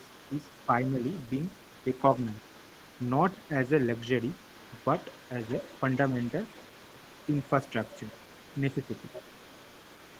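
An echo canceller that likely failed to fully remove the loudspeaker signal lets the other side's voice leak through for the whole clip. It sits faint and far below the main talker, a second voice running underneath the speech.

The same canceller likely mistook overlapping talk for echo, causing speech suppressed in double talk at 0.66 to 1.01 s, 3.35 to 3.5 s, 7.48 to 8.09 s and 8.71 to 8.91 s. The talker's voice briefly sags, most deeply around 3.4 s.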